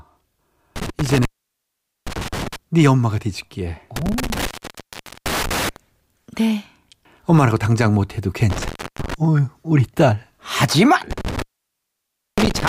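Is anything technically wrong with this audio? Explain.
Yes, the speech has an intermittent contact fault in four places: 0.76–2.56 s, 3.96–5.76 s, 8.50–9.14 s and 11.11–12.69 s. A loose cable or plug briefly loses connection, so the signal drops out for about 0.82 s, 0.79 s, 0.32 s and 0.96 s respectively, with crackle at each break and faint hiss during the gap.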